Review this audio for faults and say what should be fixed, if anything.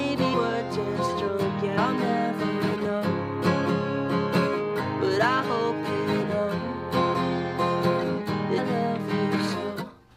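Smeared blips at 0.33, 1.77 and 8.57 s, where the sound jumps ahead by roughly 100, 70 and 300 ms. These are compressed frames skipped: whole 23.2 ms frames went missing or were rejected as damaged, and the frame overlap blurs each join. To prevent this, verify the encoded file's integrity after transfer and re-encode or re-fetch it from an intact source.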